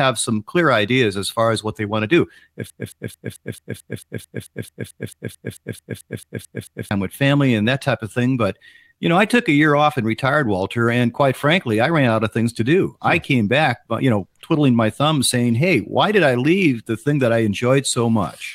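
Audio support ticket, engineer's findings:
Broken-record loop 2.7–6.91 s: 0.22 s fragment repeated 19 times, exact copies, not a decaying echo; resumes at "with family and that". Likely a player stall re-sending the last buffer.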